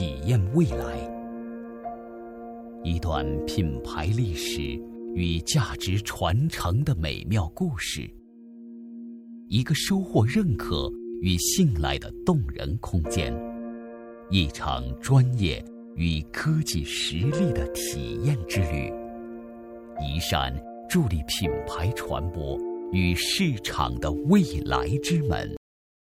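At 25.57 s the audio shows a cut-off end. The sound stops mid-event instead of fading, because the final stretch of buffers was never written out or played. From there to the end, about 0.6 s, there is only digital silence. On a waveform the signal falls from full activity straight to a flat line with no decay tail. On a spectrogram every frequency band ends at the same vertical edge, followed by blank space.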